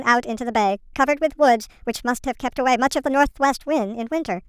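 Throughout the clip, the samples play back at the wrong sample rate, with no conversion, which fits 22 kHz audio played at 32 kHz. The speech runs about 1.45 times too fast and sits roughly 6.45 semitones high, sounding hurried and squeaky.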